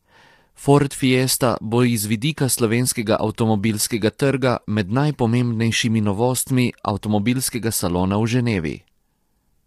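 From start to finish the speech sounds rough and grainy. Noise fills the gaps between harmonics, and the top band sounds thin and synthetic. This is likely low-delay AAC compression. Its short frames resolve pitch poorly, and the damage fits a bitrate near 32 kbps.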